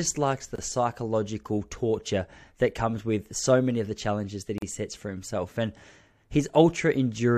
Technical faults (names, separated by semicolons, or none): gap at a join of encoded pieces